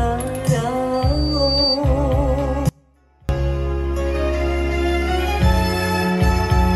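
Loudspeaker feedback squeal, from 0.93 to 1.81 s. A microphone is hearing the loudspeaker it drives, and at 4.6 kHz the round trip returns more signal than it sends, so that one frequency feeds itself. A thin, piercing tone emerges and swells over roughly 0.7 s until it sits at about the same loudness as the rest of the sound, then stops at 1.81 s as the loop is broken.

Audio dropout to a faint residue, from 2.69 to 3.29 s. The sound cuts out abruptly for 0.6 s and returns just as sharply, with no fade on either side. The gap is not silent: a faint trace of the sound remains, roughly 30 dB below its normal level. The likely cause is a momentary loss of the main signal while the path downstream stayed live and passed only a weak leak through.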